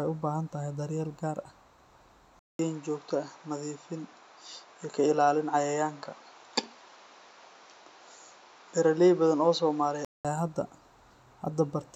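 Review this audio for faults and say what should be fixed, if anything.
The recording input most likely switched to a poorer device at 2.39 s and back at 10.25 s. A short silence of about 0.2 s marks the switch. Between those points the sound loses everything above 7.4 kHz, so it turns dull and boxy, and a new background noise sits about 35 dB below the signal. Loudness stays roughly the same, so the change is one of tone and noise. To prevent this, lock the recording to one chosen microphone and disable automatic device or profile switching for the session.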